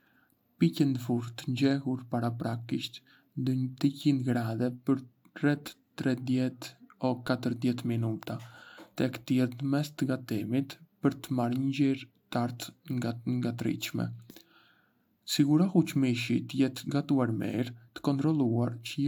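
No technical faults can be heard anywhere in the recording. There is nothing in the speech that marks a moment where something went wrong.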